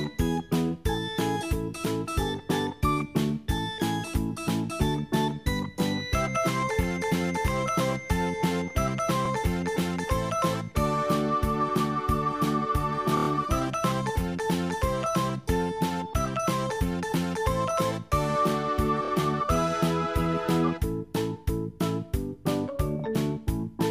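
Repeated frames: a single compressed frame, a 26.1 ms block, was written more than once and decoded again each time. It plays twice at 9.25 s, five times from 13.17 to 13.27 s, three times from 19.05 to 19.10 s, and twice from 22.99 to 23.02 s. Each repeat is heard as a brief stutter where the sound jumps back and replays itself, adding 26.1, 104.5, 52.2 and 26.1 ms of extra time.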